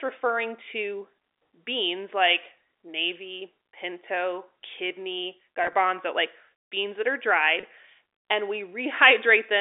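At 5.64 to 5.74 s and at 7.60 to 7.63 s, packet loss with pitch repetition fills 30 ms each time by repeating the last pitch period. The result is a briefly held, buzzy tone inside the telephone band, not a silent dropout or a click.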